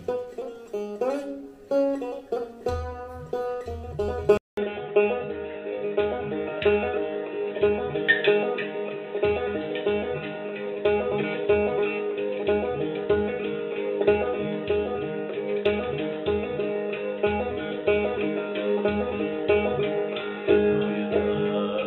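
At 4.37 s the input appears to switch to a poorer device, most likely a change to another microphone or a headset's call profile. A gap of about 200 ms of silence marks the switch. From there to the end, nothing above 3.8 kHz comes through, so the sound turns dull and boxy at much the same level, and a new background noise floor sits well beneath the signal.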